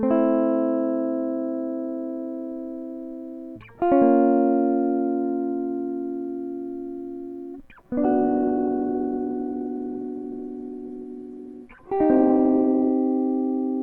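From 7.99 to 12.99 s, a call bitrate drop starves the encoder. The music turns coarse and dull, fitting roughly 12 kbps. The spectrogram shows everything above 12 kHz cut away.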